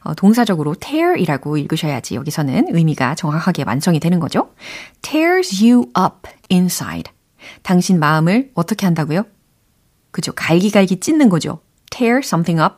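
From 5.50 to 7.02 s a galloping dit-dit-dit of short 217 Hz buzzes sits faintly under the speech, roughly 30 dB below it, stopping just before "당신 마음을 어떻게 한다고요". These are GSM signalling bursts: a nearby 2G phone exchanging brief groups of radio bursts with the network, not carrying a call. The audio circuitry rectifies that radio energy, so its 217 Hz pulsing becomes audible buzz.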